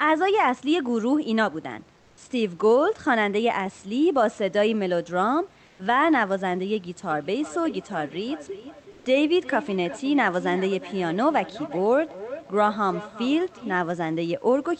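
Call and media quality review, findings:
Comfort noise in place of the background, 5.65–5.79 s and 8.91–9.05 s, 140 ms each. Real room background swapped for smooth, featureless hiss, about 1 dB quieter then about 1 dB louder. Likely Opus DTX: the sender pauses during silence and the receiver synthesises noise. On a spectrogram, short patches of uniform texture without the background's fine detail, with a faint step in level on the waveform.

Feedback echo between two devices, 7.11–13.93 s. Speech returns roughly every 0.4 s, thinner and ringier each pass, loudest about 14 dB below the direct speech. A second device in the room replays the call, and its output reaches the other microphone outside that device's echo cancellation. On a spectrogram, faint stacked copies of each speech burst at regular spacing, all cut off near 8 kHz like the rest of the call path.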